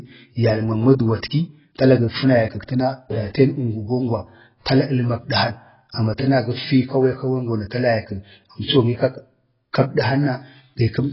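From start to finish the speech sounds dull and smeared, with heavy codec damage and nothing audible above 5.5 kHz, so sibilants lose their edge and sustained sounds take on a warbling or fizzy texture. The likely cause is AAC compression, specifically AAC-LC at a rate that fits roughly 14 kbps. At that rate the encoder lowers its cut-off and spends too few bits on each frame's frequency lines, leaving gaps in the spectrum or filling bands with stand-in noise.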